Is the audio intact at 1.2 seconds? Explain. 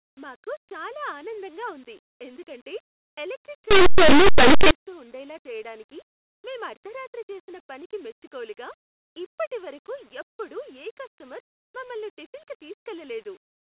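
Yes, the speech at 1.2 seconds is intact, with no fault heard at that moment.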